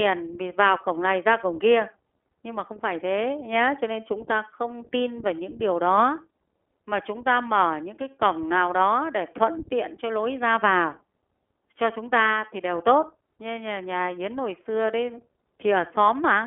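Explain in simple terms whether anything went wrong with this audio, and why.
The iLBC codec squeezed this speech from start to finish. It sounds phone-thin, with nothing above 3.4 kHz, plus a grainy, synthetic roughness a plain phone-line filter wouldn't add.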